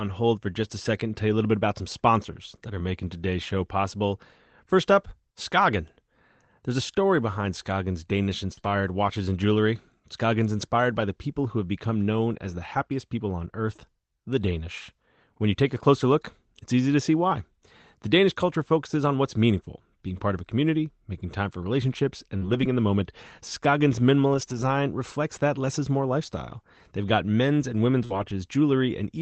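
At 8.53 to 8.70 s, short concealed packet loss fills missing audio by extending the preceding sound. It is heard as a brief smear, and appears as a smoothed, repeated spectral pattern with a softened waveform envelope. A second concealed stretch at 8.61 to 8.64 s sits inside it, and further concealed gaps follow at 22.37 to 22.43 s and 28.05 to 28.11 s.

A lost packet rebuilt from error correction occurs at 8.57 to 8.59 s (before "watches and jewelry"), 8.64 to 8.66 s, 10.61 to 10.63 s (before "by the people who"), 22.41 to 22.63 s (before "in the moment"), 24.33 to 24.63 s and 28.09 to 28.31 s. In each, the decoder played a low-bitrate copy of the missing audio carried in the next packet, so nothing drops out, but those moments sound rougher and noisier. On a spectrogram they show as grainier, blurrier harmonics over the Opus path's 8 kHz band.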